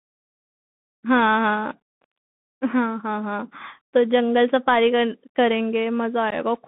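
Speech heard through a Bluetooth CVSD headset codec, narrowband throughout, with one brief dropout near the end. The whole clip sits in a band of roughly 150 Hz to 3.6 kHz, consistent with a 64 kbps CVSD link, and the codec damage is plainly audible. The coder tracks the waveform with single up-or-down steps whose size adapts, so fast, loud high-frequency movement outruns it. That leaves sibilants scratchy, adds slope-overload distortion on strong peaks, and lays a granular hiss under the voice. On a spectrogram the energy stops at a hard ceiling near 3.6 kHz, with a noisy floor beneath the speech. The second fault is unconcealed Bluetooth headset packet loss from 6.30 to 6.33 s, where about 15 ms of audio, a couple of packets between headset and phone, never arrived. Nothing was filled in, so the speech simply breaks off with abrupt edges. The waveform shows a short flat gap cutting sharply through the signal, and the spectrogram shows a thin vertical blank stripe.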